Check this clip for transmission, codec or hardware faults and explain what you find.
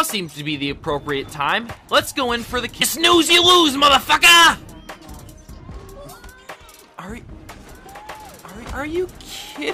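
One fault is present. From 7.71 s to the end, a doubled audio track appears, likely from a second, slower capture path. A full-band copy about one and a half seconds late and somewhat quieter abruptly overlays the sound, with no decay or room colour.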